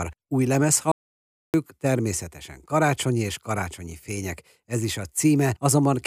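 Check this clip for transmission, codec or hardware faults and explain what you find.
There's one fault in this speech clip, an audio dropout to silence. From 0.92 s to 1.54 s the speech cuts out mid-flow, leaving about 0.62 s of silence with no room tone, then comes straight back in. The input was likely lost for a moment, through a disconnect, a failed link or a stray mute, while the recorder kept writing silence. Whatever was said in that gap is gone.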